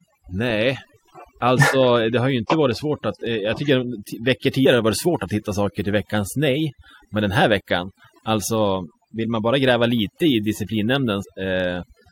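Overdone noise removal runs through the whole speech clip: a suppressor set too aggressively zeroes bands near its noise estimate, taking soft speech detail along. The near-silent gaps break up into twinkling specks, seen as isolated dots on a blank spectrogram floor.

Damaged data in a compressed stream causes a short blip at 4.65 s, just before "har det", and another from 11.22 to 11.24 s. Corrupted frames force the decoder to resync, visible as a vertical smear and waveform discontinuity.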